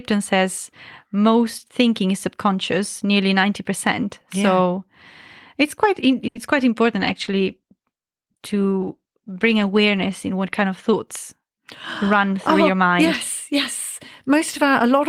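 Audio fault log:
6.27–6.37 s, short stall from a late packet: a packet arrived late and the jitter buffer ran dry, so the receiver stretched the last sound for 80 ms until it came. No speech is lost, but one sound hangs too long and playback runs 80 ms later afterwards.
6.85–11.01 s, call bitrate drop: the bandwidth estimate fell and the encoder was pushed from 32 kbps down to 17 kbps, holding the lowest rate for about 2.8 s. Coarser coding at that rate makes the speech sound rougher, thinner and more muffled until the bitrate climbs back.
12.03–12.87 s, jitter buffer speed-up: the buffer held more audio than its target, so the receiver trimmed short pitch-period pieces again and again, around 50 ms in all. The speech plays at 105% speed with its pitch unchanged and sounds hurried.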